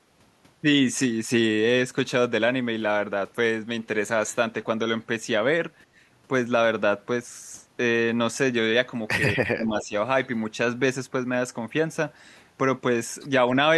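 From 9.34 to 9.93 s, the speech sinks sharply, by roughly 35 dB. This is speech suppressed in double talk, likely from an echo canceller turning down both its own talker and the loudspeaker echo.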